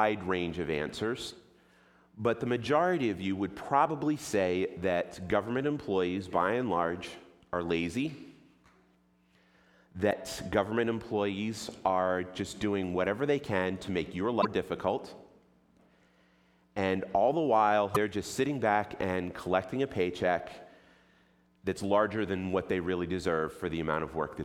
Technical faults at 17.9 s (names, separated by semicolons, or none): broken MP3 bit reservoir